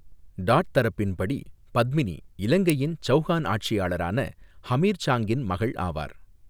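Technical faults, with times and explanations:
2.70 s, electrical switching spike: a single sharp snap peaking around -10 dBFS rides on top of the speech, which continues underneath rather than dropping out. A nearby switch or discharge arc is the likely cause.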